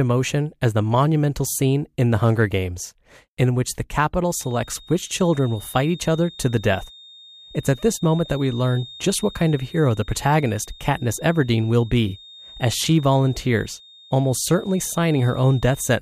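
Right after "in which the", at 4.26 s, a feedback whistle creeps in and stays to the end: a thin, steady tone near 3.7 kHz, swelling and fading slowly in level, sitting roughly 25 dB under the speech. Likely a speaker-to-mic loop hovering just at the edge of feedback.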